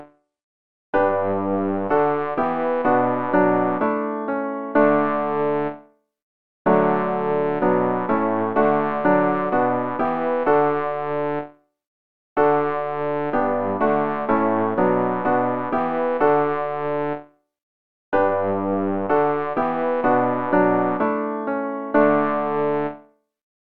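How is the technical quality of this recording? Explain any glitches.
The opening two seconds are degraded, and then the quality steps up. From 0.0 to 2.0 s the audio behaves like an adaptive stream starting at a low bitrate. The player began on a cheap version of the stream so playback could start fast. Once it had measured the connection, it switched to a better one. Until 2.0 s the treble is thin or synthetic and codec smearing is stronger, which fits AAC at about 32 kbit/s. At 2.0 s the sound sharpens abruptly with no gap, consistent with a step to about 96 kbit/s.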